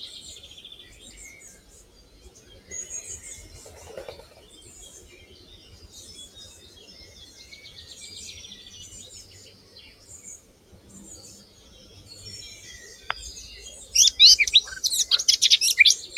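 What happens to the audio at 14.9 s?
At 14.9 s the sound pumps and thins, with sustained parts and decaying tails sinking by around 10 dB while onsets punch through. This is the noise suppressor applied to music or sounds, active throughout, treating steady tones and ambience as noise to remove.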